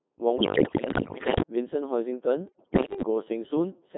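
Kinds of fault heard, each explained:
Codec 2 vocoder, throughout: The speech is reduced to pitch, voicing, energy and a spectral envelope, then rebuilt from sine waves, so the original waveform is gone. The result is heavily robotic and buzzy within about 200 Hz to 3.6 kHz, which fits a 2.4 kbit/s mode.
Bit errors on digital voice radio, 0.36 to 1.42 s and 2.48 to 3.02 s: Flipped bits corrupt whole frames of vocoder parameters, so the synthetic speech lurches in pitch, level and tone colour, breaking into warbles and gibberish. The first burst is worse, with roughly a fifth of bits wrong.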